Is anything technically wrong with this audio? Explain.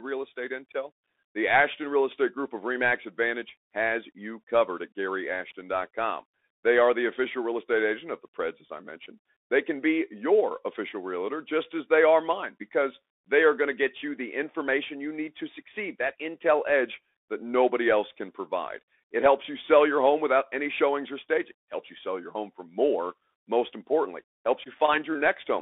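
Yes, the speech has been through a Bluetooth CVSD headset codec for the whole clip. The band runs only from about 250 Hz to 3.6 kHz, which fits a 64 kbps CVSD link. CVSD sends a single up-or-down bit per sample and adapts its step size, so fast, loud high content outruns the steps and smears. You can plainly hear it: s sounds go scratchy, transients distort, and a grainy hiss sits under the speech.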